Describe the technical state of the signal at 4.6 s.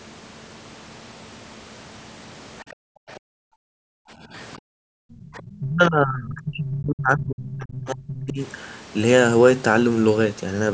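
At 4.59 to 4.67 s, the echo canceller gates the background. It ducks the microphone hard, about 40 dB deep. Room sound drops out briefly, then returns.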